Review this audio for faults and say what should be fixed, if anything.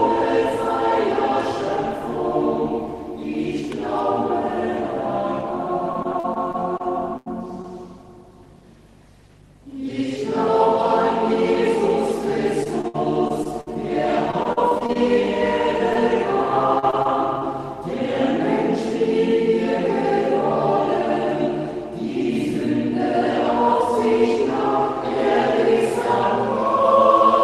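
Repeated packet loss gives a robotic, choppy sound at 5.93–6.81, 12.64–13.77, 14.31–14.97 and 16.79–17.43 s. Gaps of up to about 60 ms keep getting patched by stretching the last sound.

A burst of packet loss at 7.17–7.28 s drops about 80 ms. The receiver holds the last sound and fades it, then jumps ahead.

Short concealed packet loss at 7.62–7.66 and 15.93–15.96 s loses about 20 ms each time, heard as a quick smear or wobble.

To prevent this, sort out the network path's loss and jitter, and consider turning on Opus in-band FEC with a slightly deeper jitter buffer.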